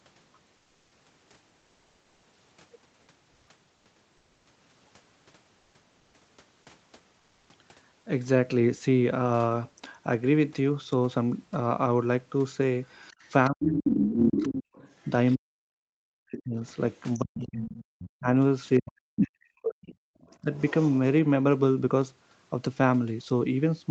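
In the early pauses of this speech, the room background briefly turns into a smooth, featureless hiss at 0.57 to 0.91 s (340 ms), 3.31 to 3.47 s, 3.75 to 3.85 s, 5.59 to 5.73 s and 7.19 to 7.49 s (300 ms). The level shifts only slightly, from about 2 dB quieter to about 1 dB louder. This is comfort noise in place of the background. The sender's voice detector likely treated these gaps as silence and stopped sending under Opus discontinuous transmission, so the receiver filled them with synthetic noise.

From 12.86 to 15.09 s a second voice runs under the talker, nearly as loud, at about 5 dB below. This is the other side's voice leaking through: the far end's audio played on the talker's loudspeaker and was likely not fully cancelled from the microphone. While it overlaps, from 13.49 to 14.66 s, the talker's own speech sinks by as much as 25 dB or so. This is speech suppressed in double talk: the echo canceller likely could not separate near and far voices and pulled both down. 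The pattern repeats more heavily. The talker drops away by up to roughly 40 dB at 15.38 to 16.57 s and again across 17.21 to 19.85 s, with gaps adding up to around one and a half seconds. Fainter leakage sits underneath at 16.65 to 18.1 s, about 20 dB down. A louder burst of the other voice comes through at 18.89 to 19.21 s, about 5 dB down. A quiet leak at 19.84 to 21.0 s, about 25 dB down, comes with a brief, shallow dip of around 10 dB at 20.42 to 20.52 s. Throughout, nothing above 8 kHz is present, consistent with the Opus call path.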